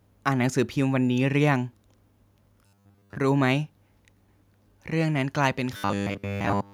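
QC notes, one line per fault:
2.66–3.16 s and 5.77 s to the end: robotic sound from repeated short buffers. The speech becomes a rigid metallic buzz at 100 Hz, likely because a 10 ms chunk keeps repeating while most of the real audio is skipped.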